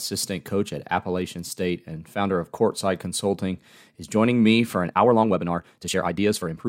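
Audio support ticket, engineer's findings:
Time-stretched section from 4.81 s to the end, right after "is joining me for". The pace jumps to 1.59x and sounds rushed, with pitch unchanged. Likely a length-fitting step in the editing or playout software squeezing the tail. Short slices get dropped and the rest spliced together, so tempo rises while pitch holds.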